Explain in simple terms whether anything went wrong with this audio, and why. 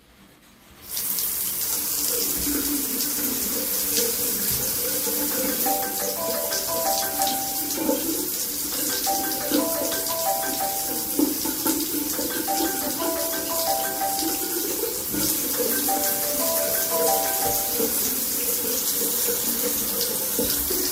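Nothing stood out as a problem when listening to this recording of sounds.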